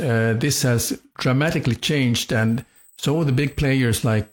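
From 2.48 s to the end, a USB whine sits under the speech. It is a steady, fixed-pitch tone at 8 kHz, strongest at its 16 kHz harmonic and well below the speech. It comes from the bus's 125-microsecond microframe current leaking into the power or ground.

Between 2.63 and 2.76 s, an AAC frame loss with concealment smears the sound into a brief noisy, phasey patch. The gap fits one lost frame of about 43 ms. The decoder filled it by guessing from the last good spectrum.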